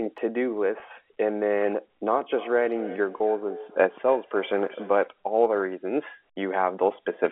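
Speech carried over a G.711 telephone line, audible as the narrow band from 250 Hz to 3.4 kHz, suffers packet loss with pitch repetition at 0.80–0.82 s and 3.18–3.20 s. Each gap, which fits a single lost 20 ms packet, is concealed by repeating the last pitch period, so the sound briefly holds with a slight buzzy sustain before continuing.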